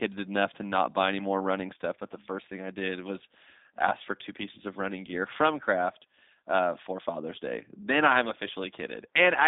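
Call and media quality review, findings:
G.729 codec damage, whole clip, plainly audible. Speech rough and synthetic. Probable component: low-rate CELP voice path, fits an 8 kbit/s G.729A leg, rebuilding speech from a filter, pitch predictor and sparse pulses. Spectrogram: hard ceiling at 3.7 kHz, little below 250 Hz, smeared harmonics. Waveform: loss of fine detail between pitch pulses.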